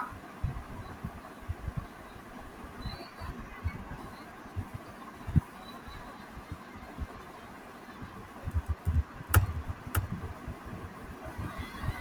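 From 9.26 s to the end, the speech is shadowed by a second copy of itself trailing roughly 0.7 s behind and somewhat quieter, about 5 dB down. It arrives suddenly, with no build-up, and sounds dry and full-range rather than like a room echo. This is a doubled audio track, most likely the same signal captured again through a slower path, or an edit leaving two copies out of step and mixed together.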